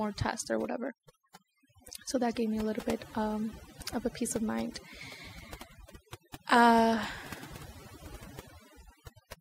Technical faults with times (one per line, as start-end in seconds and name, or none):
0.00-9.40 overdone noise removal